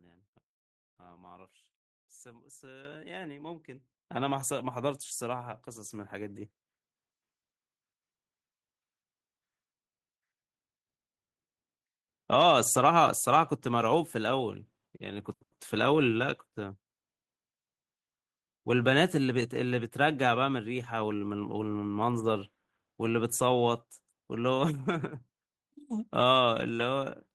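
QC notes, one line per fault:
2.85 s, microphone volume stepped up: speech and background jump up together by about 11 dB. The input volume was raised in one step.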